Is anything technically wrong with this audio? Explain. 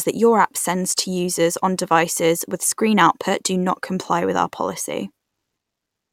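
No, nothing technically wrong can be heard in this speech recording. There is no moment in it that calls for comment.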